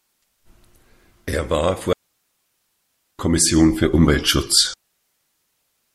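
At 1.93 s the speech falls into a digital wireless dropout lasting about 1.26 s, until 3.19 s, and a second dropout begins at 4.74 s, about 1.2 s, running to the end. The receiver lost too much of the digital link and muted itself with a very short fade, leaving clean near-silence. Unlike an analogue radio dropout, no hiss, static burst or squelch noise is heard on either side of the gap.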